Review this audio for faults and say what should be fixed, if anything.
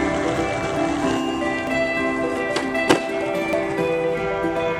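At 1.67, 2.88 and 3.53 s the sound jumps abruptly, and the likely cause is a dropped buffer (overrun): the capture program fell behind, the hardware overwrote unread samples, and the audio on either side was spliced together. Roughly a tenth of a second goes missing at 1.67 and 3.53 s, and about a fifth at 2.88 s. Unlike a dropout, no silent gap is heard; the sound simply skips forward. Running the capture thread at higher priority with larger buffers prevents this.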